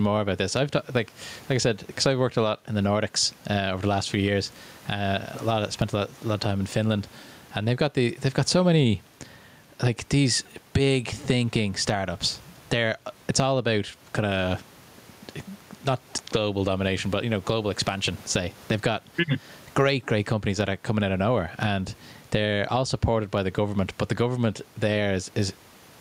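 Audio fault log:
throughout, gain pumping: background swells in the pauses and ducks around 10 dB under speech, likely gain set too hot with a fast limiter clamping each loud bit.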